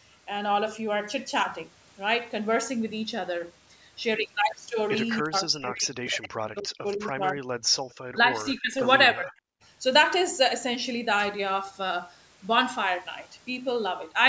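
From 5.22 to 7.46 s the speech dips sharply, by roughly 40 dB at its deepest. This is speech suppressed in double talk, likely from both sides talking at once. At 6.91 to 6.97 s a faint echo leak appears, a copy delayed by 282 ms, likely from loudspeaker pickup. At 7.90 to 7.94 s a fainter echo leak recurs, likely the same cause. From 8.11 to 8.81 s the speech drops by about 20 dB, likely more double-talk suppression. From 9.13 to 9.35 s it drops by about 30 dB, likely for the same reason.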